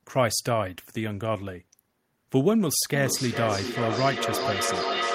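From 2.94 s to the end of the clip, the speech comes back as feedback echo between two devices. A second device in the same room plays this talker's audio aloud, and the first microphone picks it up again. Each echo canceller removes only its own device's playback, so the sound keeps circulating. The repeats arrive at a steady interval of roughly 0.4 s, sound thinner and more ringing than the original, and peak about 3 dB below the speech. That recirculation separates it from a single local echo.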